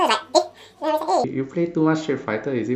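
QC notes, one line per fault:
0.00–1.24 s: audio read two samples at a time (double speed). Each pair of samples is taken as one frame, so the speech plays twice as fast and a full octave high.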